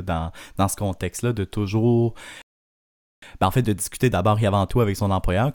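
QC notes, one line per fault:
2.42–3.22 s, rebuffering stall: the speech halts abruptly and drops to full silence for about 0.81 s, then picks up again at exactly the point where it broke off. No syllables are skipped or repeated on either side of the gap. The playback buffer ran dry before the next block of audio had downloaded, so the player paused rather than dropping data. The content is intact, but the pause lengthens the clip by the length of the gap.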